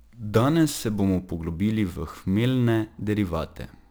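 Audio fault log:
Throughout: sample clock jitter. The converter's timing wanders at random by roughly 10 µs, so each sample lands slightly off its proper instant. Where the speech waveform changes fastest, that timing slip becomes a large amplitude error, sitting only about 25 dB below the signal. The result is a gritty hiss that swells on loud syllables and bright sibilants and disappears in the pauses, unlike a steady noise floor, which would remain audible in silence.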